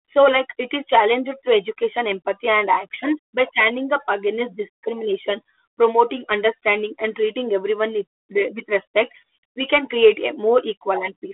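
No technical faults can be heard in this recording.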